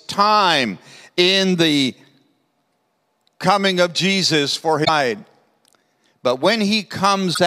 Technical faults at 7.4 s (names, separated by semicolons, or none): broken MP3 bit reservoir